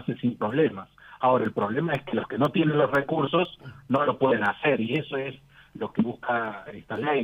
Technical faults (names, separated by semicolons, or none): periodic USB or driver dropouts